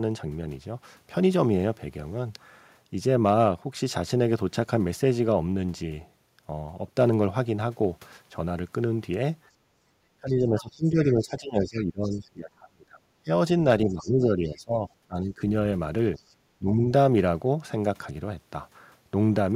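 From 9.49 to 9.80 s the room background dips by about 12 dB, which is background gated by the echo canceller as it clamps the microphone during loudspeaker playback. From 10.21 to 15.42 s the speech repeatedly drops, at worst by around 20 dB, for roughly four seconds in total. This is likely speech suppressed in double talk, with the canceller unable to separate talker from echo. Within that stretch, at 10.28 to 12.20 s and 13.89 to 14.11 s, a faint second voice some 25 dB below the speech is likely the other side's voice leaking through uncancelled echo. A fainter scrap follows at 16.17 to 16.21 s. The background then gates again from 16.21 to 16.31 s, by about 14 dB, and the speech dips by around 15 dB from 16.59 to 16.83 s.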